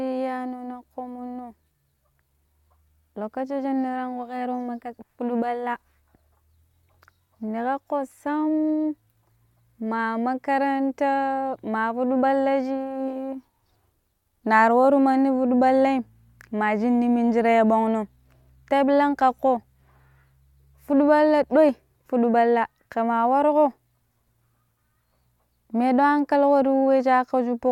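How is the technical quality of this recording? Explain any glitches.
The recording's technical quality is good, and there are no glitches to explain.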